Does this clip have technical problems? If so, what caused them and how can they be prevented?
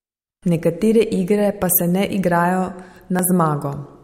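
Yes. There are two dropped buffers (overrun), at 1.73 s between "igre pa" and "se ne igrajo", and at 3.19 s after "pa se ne igrajo". Each is a jump where about 10 ms of sound vanishes and the two sides join directly. This is likely caused by the recording software not reading its input buffer before the hardware overwrote it. Larger buffers and a less loaded capture process prevent it.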